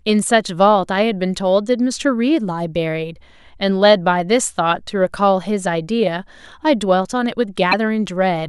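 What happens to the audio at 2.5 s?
Nothing goes wrong at 2.5 s; the speech runs through that moment intact, with no dropout, click or other fault.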